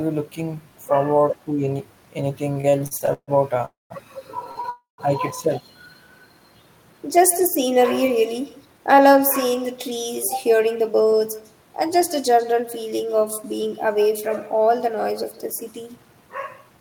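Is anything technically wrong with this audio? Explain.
Yes. This speech clip has several network-related faults.

An echo with no canceller runs throughout. The far end's loudspeaker feeds its microphone, and nothing strips that out, so the speech returns after roughly 150 ms at about 17 dB below the original. Every phrase has a faint, thinner shadow trailing just behind it. On a spectrogram each burst of energy has a weaker, smeared copy offset slightly to the right. In the waveform a small ghost envelope follows each syllable.

Repeated stalls (stutter) run from 2.53 to 3.62 s. The jitter buffer emptied nine times there, and the receiver stretched the last sound each time until packets caught up. About 338 ms was filled in, close to a third of that stretch, and the longest hold was 144 ms. Nothing is lost, but the speech drags and judders. A spectrogram shows repeated flat, smeared bands where harmonics freeze in place. 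The waveform shows periodic, repetitive segments.

A call audio freeze occurs from 3.65 to 3.93 s and again from 4.70 to 5.01 s, likely from packets held up in transit. The receiver continued the last sound as a fading buzz or hiss, then fell silent for about 180 ms in the first freeze and 140 ms in the second. The speech then resumes where it stopped, pushed later by about 251 ms and 285 ms. On a waveform this is a decaying tail into a flat stretch. A spectrogram shows the harmonics smearing, then a blank gap.

A short stall from a late packet comes at 4.51 s and at 4.61 s. Each time a packet missed its slot, and the last sound was held for about 37 ms and then 25 ms before playback continued from the same point. The result is a brief held instant with a slight buzz or dip. A spectrogram shows short horizontal streaks where the spectrum stops changing. The waveform shows a few repeated cycles.

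A jitter buffer speed-up runs from 6.85 to 10.81 s at 107% and from 15.71 to 16.78 s at 111%. The buffer had built up excess delay, so the receiver trimmed pitch-period-sized pieces over and over. Roughly 300 ms and 100 ms were removed. The pitch stays the same, but the speech sounds hurried. A spectrogram shows syllables packed closer with unchanged harmonic spacing. The waveform shows tiny splices between periods.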